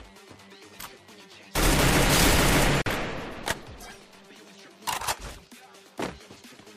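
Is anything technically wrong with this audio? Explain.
Yes. A gap at a join of encoded pieces runs from 2.82 to 2.86 s, a 45 ms silence where separately encoded segments were butted together with their encoder delay and end padding left in. It shows as a blank vertical strip in the spectrogram and a flatline in the waveform, edges smeared, before the sound resumes where it stopped.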